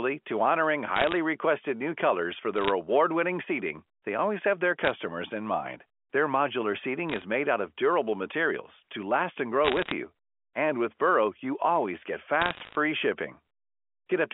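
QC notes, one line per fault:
0.96–1.16 s (after "to honoring"), 2.56–2.70 s, 4.84–4.91 s (before "in mind"), 7.09–7.22 s, 9.65–9.92 s (after "last and grow"), 12.42–12.75 s: bit errors on a digital phone line. Roughly 0.4 to 1 percent of bits are flipped, with the densest burst near 9.7 s. Flips that hit a high bit or the sign of a loud sample on the A-law line become sharp ticks, and these ticks add up to short crackle bursts.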